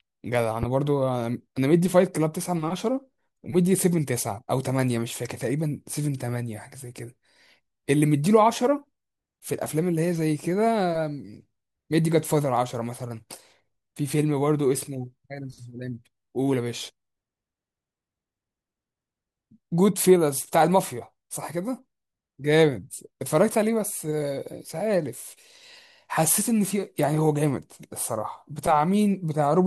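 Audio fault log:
0.63–0.66 s loud pop: a single sharp pop roughly 10 dB above the speech, which carries on beneath it rather than breaking off, likely from a plug, switch or static discharge.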